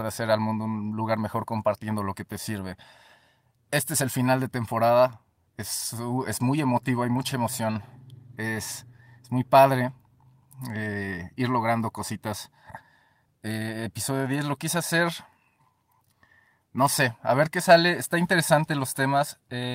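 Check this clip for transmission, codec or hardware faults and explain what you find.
No faults found: nothing audible in the speech points to a problem anywhere in the signal chain.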